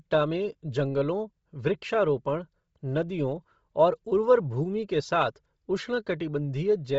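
Speech with heavy codec damage throughout: breathy, grainy edges, nothing above 7.7 kHz, and a spectrogram with a hard ceiling over noise-filled upper bands, likely Bluetooth LC3 compression at a low bitrate.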